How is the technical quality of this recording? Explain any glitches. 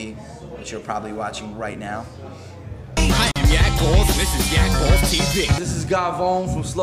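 The recording has one glitch: a gap at a join of encoded pieces, from 3.31 to 3.36 s. The continuous sound drops out for about 44 ms and then resumes exactly where it stopped. This happens when separately encoded segments are joined without trimming. The leading encoder delay and the padding of the final frame both remain as silence at the seam. The edges of the dropout are smeared by the codec, so the fully silent part is shorter than the gap.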